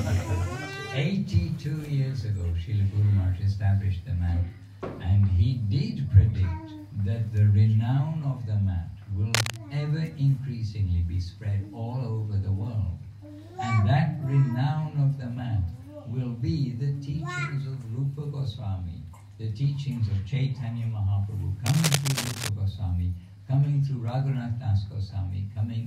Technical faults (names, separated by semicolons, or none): cable scratch noise